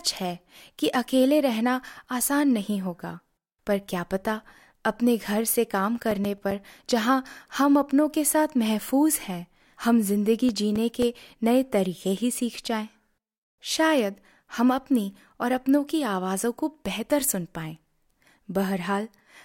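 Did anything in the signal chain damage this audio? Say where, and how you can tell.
Yes. In CD playback, a scratch destroyed more data per revolution than error correction could rebuild, so the player concealed or muted it. The resulting CD scratch ticks, each a few milliseconds, recur nine times from 5.84 to 6.91 s and eight times from 10.49 to 11.42 s.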